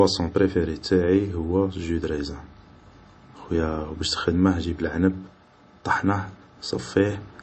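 Throughout this speech recording the treble stops dead at 8.3 kHz, and the remaining sound has a plainly audible watery, swirling texture, as weak frequency components flicker in and out from one frame to the next. The likely cause is MP3 compression at a low bitrate, around 33 kbps. Short of bits, the encoder discards the top of the spectrum and zeroes the quieter detail it judges least important.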